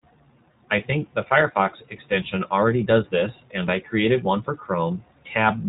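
From start to finish the speech sounds boxed-in and slightly rough, with a faintly synthetic edge and nothing in the upper range where sibilants and breath would normally sit. This is iLBC codec damage, plainly audible throughout. The narrowband coder discards everything above 4 kHz and rebuilds each short frame's excitation on its own, without carrying detail over from the previous frame. The character fits the 15.2 kbps mode with 20 ms frames.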